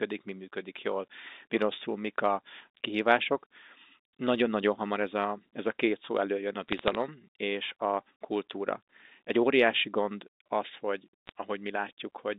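Bit errors on a digital phone line appear as three bursts of crackle. The first runs from 4.27 to 4.35 s, just before "hamar ez a ez". The second and longest is from 6.68 to 6.95 s, between "két szó előjön a" and "és a kultúra". The last is brief, 11.27 to 11.30 s, after "óriási gond az hogy". On the G.711 mu-law line, a rate of roughly a few bits per thousand is flipping single samples, and hits on sign or high-order bits produce sharp ticks over unchanged speech.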